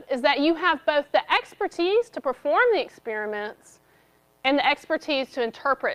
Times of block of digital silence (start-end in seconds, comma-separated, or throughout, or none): none